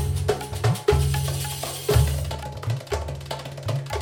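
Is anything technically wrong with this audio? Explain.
No, nothing technically wrong stands out here, so there's nothing to flag.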